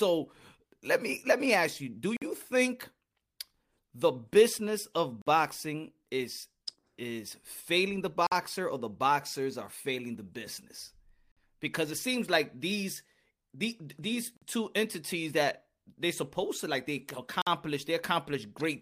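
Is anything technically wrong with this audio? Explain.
Yes. At 2.17, 5.22, 8.27, 11.32, 14.37 and 17.42 s, the speech drops into hard-edged 50 ms silences: a gap between chunks, inserted after every 3.0 s block of audio.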